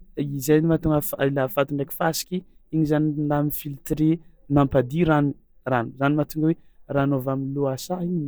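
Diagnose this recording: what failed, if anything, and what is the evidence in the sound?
Nothing failed; the speech shows no audible technical fault.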